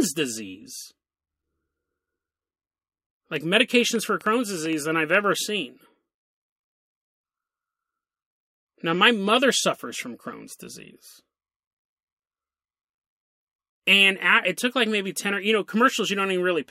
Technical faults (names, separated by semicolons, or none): train of clicks